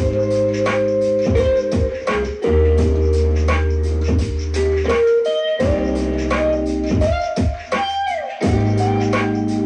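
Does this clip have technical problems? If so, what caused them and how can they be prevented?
No, nothing stood out on listening to this clip, so there is no problem to trace to a cause or to prevent.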